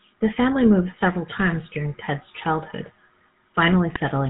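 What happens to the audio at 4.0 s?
Right around there, from 3.94 to 4.00 s, you get GSM bit errors. Corrupted bits got into the decoder, so the filter, pitch or gain values it rebuilt for that stretch were garbage. That throws the spectrum out of shape and the level jumps, and you hear it as a short squawky, gargling pop. The span of about 60 ms fits roughly three 20 ms frames being hit, and the damage sounds like an error rate near 2 percent.

Under that, and through the whole clip, there's the GSM full-rate codec, which sounds like the 13 kbps version. It rebuilds the voice with a vocal-tract filter driven by evenly spaced pulses and keeps only a thinned-out excitation. Nothing gets through above 4 kHz, so the speech is dull and band-limited, and it has that clear buzzy, gravelly roughness on top.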